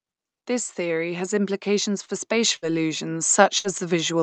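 From 0.47 s to the end, automatic gain rising: the gain control judged the input too quiet and kept raising its gain gradually rather than all at once. As a result, the speech and the background noise behind it swell together over several seconds, so the level creeps upward instead of holding steady, and the noise floor climbs along with the voice.

At 2.05 to 2.11 s comes a short stall from a late packet. The next packet had not arrived when the jitter buffer needed it, so the buffer ran dry and the receiver stretched the last sound by about 30 ms while it waited. It then carried on from the same point, with no speech lost. What you hear is a brief held, slightly buzzy sound, and everything after it plays about 30 ms later.

Two bursts of packet loss follow, at 2.56 to 2.65 s and at 3.58 to 3.67 s. Each time, about 60 ms of audio never reached the receiver in time to be played. The concealment extended the last sound for roughly that long and faded it down, producing a held buzz or a dying hiss. 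Speech then resumes further along, with the audio in between gone. Through the Opus call path the band tops out at 8 kHz, at a bitrate of 48 kbps.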